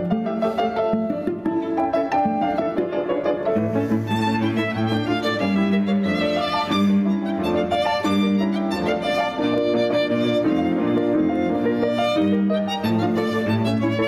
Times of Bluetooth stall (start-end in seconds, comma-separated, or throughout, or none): none